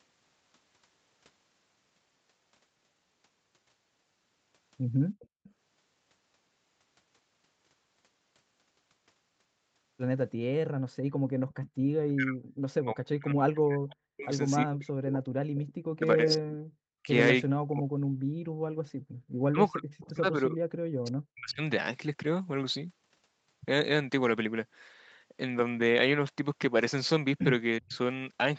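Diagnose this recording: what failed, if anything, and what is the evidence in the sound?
The echo canceller in the call processing failed to cancel its loudspeaker signal, most likely leaving residual echo in the returned audio. An echo leak is heard as a faint delayed copy of the speech at 5.21–5.49 s, 11.49–11.7 s, 15.55–16.31 s and 27.89–27.97 s. It trails the original by roughly 350 to 390 ms and sits about 15 to 30 dB below it. The far-end loudspeaker's sound reached the microphone and was sent back.

The echo canceller's suppressor also clamped down too hard while the loudspeaker was active, leaving the background gated by the echo canceller. Between 10.7 and 11.83 s the room sound dips, by as much as about 36 dB, for around a third of a second in all. It comes back when the canceller releases. Those sudden holes in the ambience are the audible trace of its gain switching.

The most likely cause of the third fault is that the echo canceller could not tell the near talker from loudspeaker echo while both sides spoke, so it attenuated everything. 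The result is speech suppressed in double talk. From 12.11 to 21.62 s the speech repeatedly dips, thins or breaks up, by as much as about 40 dB and for around five seconds in total. It happens again briefly at 27.79–27.95 s.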